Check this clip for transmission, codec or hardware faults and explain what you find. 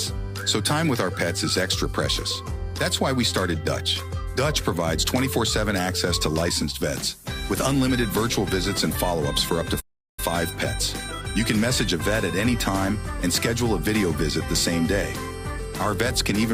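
One fault: a playback stall from 9.80 s to 10.20 s. The player likely ran out of buffered data or had its output thread blocked, so nothing reached the output for roughly 380 ms. The sound cuts off mid-flow, leaving a gap of silence before it resumes.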